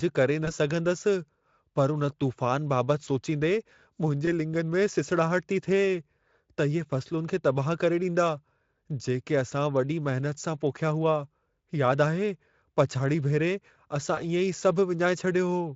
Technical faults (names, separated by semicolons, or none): VoIP packet loss concealed by the speech codec